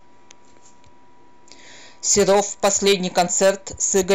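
Hard clipping runs through the whole speech clip. The signal reaches a stage at about 8 dB more level than it can pass. Every peak above that ceiling is sliced flat. Only a small share of the samples, a few percent, are cut. But those flat tops create harmonics high in the spectrum. The result is a harsh, gritty crackle. It lands on the loudest moments of the speech and comes and goes with them.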